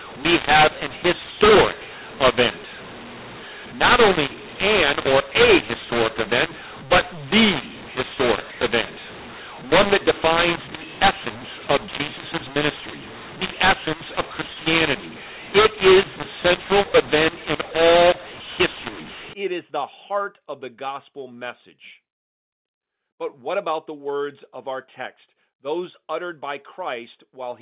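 Speech sounds harsh and gritty from 0.0 to 19.33 s, its levels scrambled and its pauses filled with hiss. This is mu-law and A-law mixed up: telephone audio coded with mu-law is decoded as A-law, mis-mapping every level and lifting near-silent samples into audible noise within the 4 kHz telephone band.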